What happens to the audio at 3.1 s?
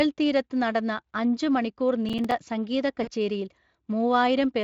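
Just before 3.1 s, from 3.03 to 3.09 s, there is VoIP packet loss concealed by the speech codec. About 40 ms of audio went missing, which fits two lost 20 ms frames. The decoder filled the hole by extending its last pitch and spectral shape while stepping the level down. The speech smears into a brief buzzy tone or coloured noise that fades. Because each frame builds on the previous one, it stays weak or distorted for tens of milliseconds or more as the signal recovers.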